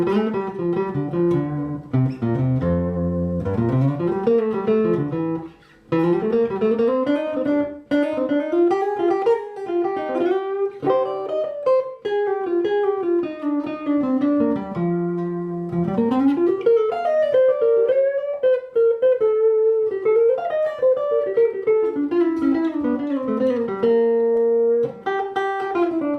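There are no technical faults to describe.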